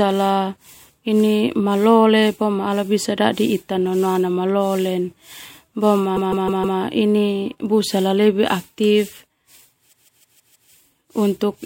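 Speech, with repeated frames in two places. At 6.15 s a block of about 157 ms plays again four extra times, stuttering through to 6.78 s. At 9.92 s the same length of block repeats five extra times, lasting until 10.70 s. The block length fits a run of six compressed frames. That run was stored or sent more than once, so the decoder replays it. The two stutters add about 0.63 s and 0.78 s.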